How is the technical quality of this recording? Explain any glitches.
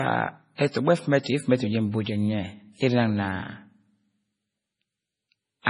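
The technical quality is poor: heavy codec damage runs through the whole recording, and two attacks are smeared early on.

MP3 compression, likely at a very low bitrate of about 24 kbps, starved the encoder of bits. It cut everything above 10.5 kHz and dropped weak frequency lines frame by frame, so the speech sounds dull, watery and swirly, with metallic edges on sibilants.

Pre-echo occurs at 0.55 s and again at 0.71 s. The codec spread quantisation noise across each block containing a sharp onset, smearing it about 34 ms ahead of the attack. A brief hiss precedes each onset, and the attacks sound soft.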